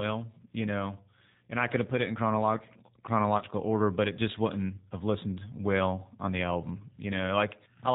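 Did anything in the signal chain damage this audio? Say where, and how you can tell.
Yes. The codec stage is at fault throughout. The speech sounds rough and synthetic, with nothing above 4 kHz. This is G.729 coding, which fits an 8 kbit/s stream. It rebuilds speech from a vocal tract filter, a pitch predictor and sparse pulses.

At the network stage, VoIP packet loss concealed by the speech codec appears from 3.38 to 3.44 s, between "put it in chronological" and "order but it just". About 30 ms of audio is missing, which fits one lost packet. The decoder extended its last pitch and filter with falling gain, and the speech stays weakened briefly afterwards.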